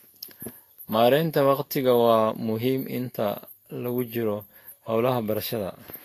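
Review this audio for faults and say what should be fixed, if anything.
Throughout the clip there's a grainy, hissy edge on the speech, with roughened tones, smeared attacks and nothing above 14.2 kHz. That's Vorbis compression, likely at a low bitrate around 34 kbps, quantising the treble so coarsely that its fine detail turns into noise. Encode at a higher quality setting, or keep a lossless master, to avoid it.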